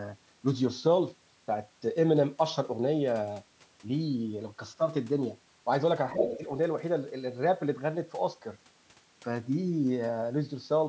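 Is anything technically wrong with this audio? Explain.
Yes, there are two overlapping faults around the six-second mark.

From 6.13 to 6.44 s, the talker's speech drops sharply, by roughly 10 dB at its deepest, for about a third of a second, then recovers. This is speech suppressed in double talk. Both ends of the call were talking at once, and the echo canceller likely could not separate the local talker from the loudspeaker's echo. It pulled the whole microphone signal down, so the talker dips even though nothing changed at the talker's end.

Inside that same stretch, from 6.18 to 6.37 s, a second voice is audible at only about 5 dB below the talker. This is the other side's voice leaking through. The far-end talker is playing from the local loudspeaker, and that sound is reaching the microphone. The echo canceller likely failed to remove it, because it was being confused by the double talk at that moment. 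The result is a brief, fairly loud intrusion that overlaps the suppressed speech, rather than a faint background trace.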